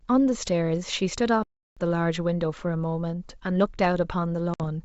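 It's a speech clip on what sounds like a G.722 wideband call, clear up to around 7 kHz, with two problems. First there's a playback stall from 1.43 to 1.77 s, a dead gap of about a third of a second, most likely the player running dry or its thread getting blocked before it picks up again. Then at 4.54 to 4.61 s there's packet loss on the ADPCM call, a hard-edged 60 ms hole, roughly a few packets' worth. The decoder's predictor and step size lose sync with the sender, so the speech comes back slightly distorted before settling.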